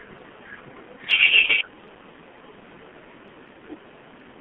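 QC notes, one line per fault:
throughout: G.723.1 codec, muffled and hoarse sound limited to 150 Hz–3.5 kHz, with smeared consonants, fitting a heavy 6.3 kbit/s model rather than a simple low-pass filter.
1.46–1.50 s: VoIP packet loss concealed by the speech codec. Instead of silence, a brief, fading extrapolation fills the gap, pointing to one lost 30 ms frame.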